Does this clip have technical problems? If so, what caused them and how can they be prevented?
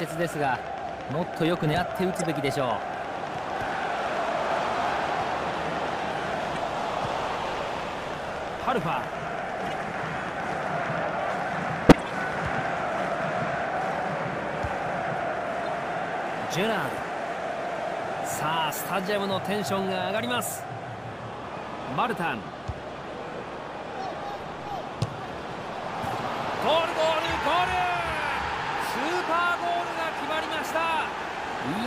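Yes. A train of clicks, likely from interference or a faulty connection, puts about a hundred regular pops, 8.8 per second and around 10 dB above the sound, from 0 to 13.2 s. Shielding cables, separating equipment and checking the interface's connection and drivers prevents it.

Corrupt frames were decoded despite flipped bits, producing brief misplaced-frequency blips at 1.13, 2.19, 6.55, 9.65, 26.09 and 27.24 s, and a louder burst over 11.89–12.08 s. Error-checked transport with concealment of damaged frames prevents it.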